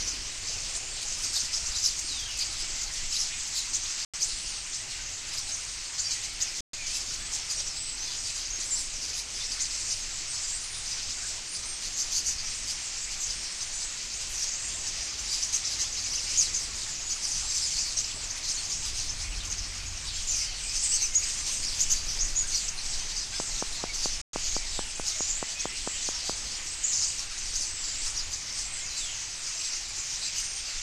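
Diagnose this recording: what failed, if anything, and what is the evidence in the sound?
Bluetooth stall at 4.05, 6.61 and 24.22 s: the sound drops to silence for 87, 127 and 118 ms, then resumes. This is a wireless playback-link fault, likely interference delaying packets until the headphone buffer emptied and waited for retransmissions.

Train of clicks from 23.4 to 26.3 s: about fifteen similar clicks at a steady 4.63 per second, standing well above the sound, roughly 15 dB. This points to the analogue wiring or interface stage, where nearby equipment or a struggling connection injects repeated pulses.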